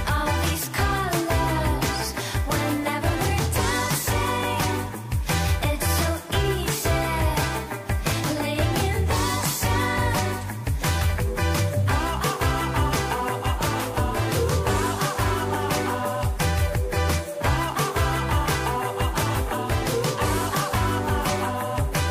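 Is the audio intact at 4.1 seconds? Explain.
Yes, the audio is intact at 4.1 seconds, with nothing there that disrupts the sound.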